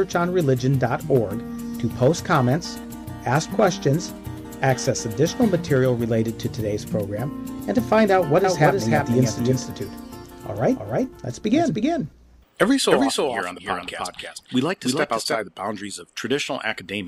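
From 8.44 s to 15.38 s, a second full-band copy of the sound trails the original by roughly 300 ms, around 5 dB quieter, cutting in and out abruptly with no decay. This doubled audio track likely comes from a slower second capture path.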